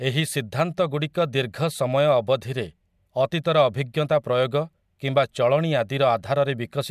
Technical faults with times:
none

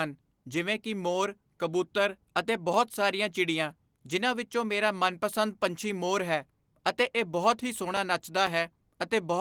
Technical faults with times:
7.97-8.97 periodic USB or driver dropouts

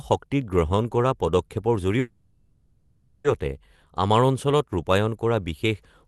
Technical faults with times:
1.99-3.27 call audio freeze

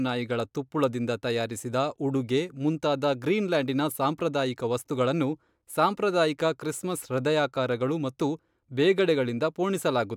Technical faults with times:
none

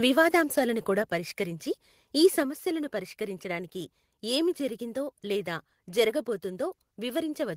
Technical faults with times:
1.02 microphone volume stepped down
2.43 microphone volume stepped down

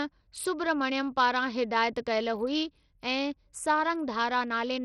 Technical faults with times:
0.00-4.85 Bluetooth SBC compression

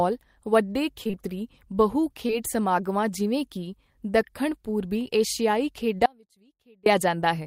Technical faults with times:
1.03-1.15 short concealed packet loss
2.27-2.31 short concealed packet loss
6.06-6.86 audio dropout to a faint residue

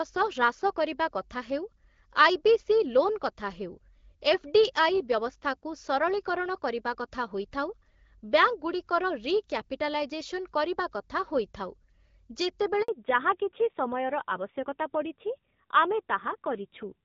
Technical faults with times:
12.82-12.88 handover gap
12.88-17.04 fallback to narrowband

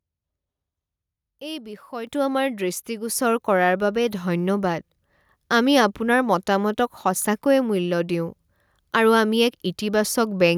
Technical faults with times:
2.07 microphone volume stepped up

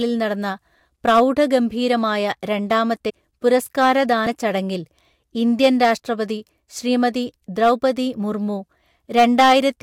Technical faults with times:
1.08-1.55 hard clipping
3.09-3.11 compressed frames skipped
3.47-4.13 hard clipping
4.25 compressed frames skipped
5.63-5.92 hard clipping
7.63-7.71 hard clipping
9.18-9.58 hard clipping

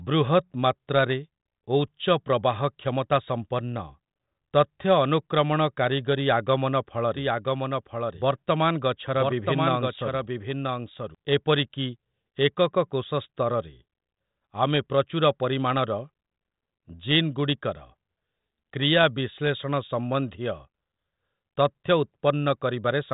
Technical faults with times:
7.17-11.15 doubled audio track

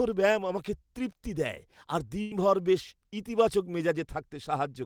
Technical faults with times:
2.21-2.33 burst of packet loss

